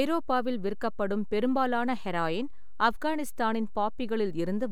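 From start to end the speech carries a DC offset of about -33 dBFS: the waveform sits displaced from zero by a fixed amount. It is inaudible as such, but it shows as constant energy at 0 Hz and eats into the available headroom.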